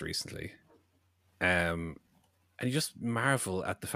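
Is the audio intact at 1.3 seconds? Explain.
Yes, the speech at 1.3 seconds is intact, with no dropout, click or other fault at that moment.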